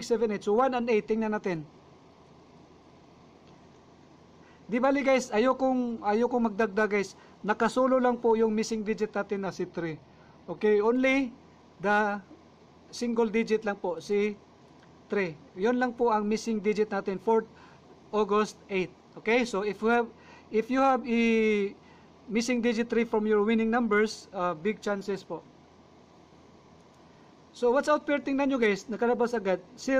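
At 9.46 s the audio drops about 5.7% in speed and sags roughly a semitone flat (about -102 cents), then snaps back at 10.93 s. That's likely a drift correction step, where clock-matching software abruptly changed the playback rate to rebalance its buffer.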